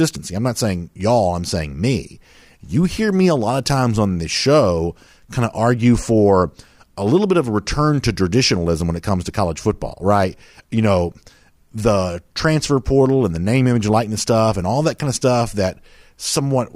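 A short stretch of speech, and there's nothing technically wrong with it that a careful listen turns up.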